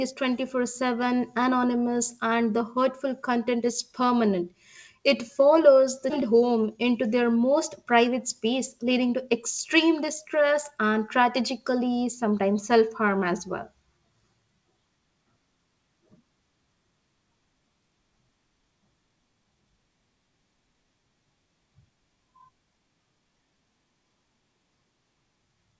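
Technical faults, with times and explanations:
6.10–6.12 s, skip ahead: roughly 0.4 s of sound vanishes and playback lands directly on later material with no filler or silence. Delayed audio was thrown away so the receiver could catch up, cutting the delay by about the same amount. On a spectrogram the harmonic bands and formants change abruptly at one vertical line, with no decay or gap. The waveform shows an envelope discontinuity where the joined sides fail to line up.
6.82–7.45 s, jitter buffer speed-up: just before "private space leading", the speech runs about 9% fast and sounds hurried, but its pitch stays the same. The receiver had built up excess buffered audio and trimmed it by repeatedly removing one or a few pitch periods at a time, roughly 70 ms in total. The spectrogram shows harmonics at unchanged heights while syllables and their spacing shrink horizontally. On the waveform, small splices between similar cycles appear across the stretch. 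Throughout, nothing appears above 8 kHz, which fits the wideband call codec in this path.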